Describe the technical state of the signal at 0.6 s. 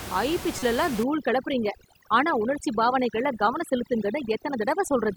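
At 0.6 s the speech hits damaged data in the compressed stream, from 0.59 to 0.63 s. For about 36 ms the decoder is fed corrupted frames, misreads them, loses sync and hunts for the next valid frame header, producing a chirp, squawk, click or short hole. The room noise sits about 12 dB below the speech.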